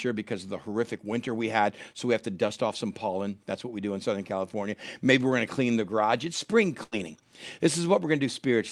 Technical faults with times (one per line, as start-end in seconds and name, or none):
6.83-6.95 burst of packet loss